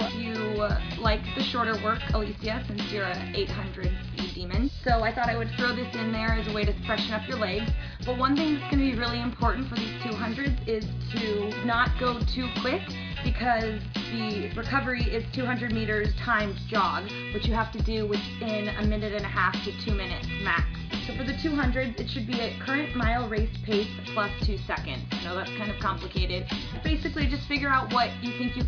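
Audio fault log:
No faults can be heard anywhere in the clip. Nothing in the audio calls for an entry in this log.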